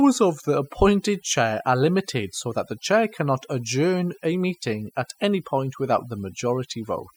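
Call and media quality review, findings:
Overdone noise removal, whole clip. Background nearly silent with twinkling specks. Denoiser set too hard, gating bands near its noise estimate and taking quiet speech detail with them.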